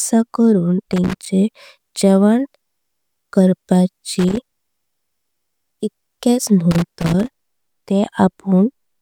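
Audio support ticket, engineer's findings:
Loose connector crackle in speech at 0.92–1.28, 4.19–4.56 and 6.71–7.40 s: a worn contact making and breaking chops the signal. The scratchy, irregular bursts set it apart from evenly spaced digital clicks.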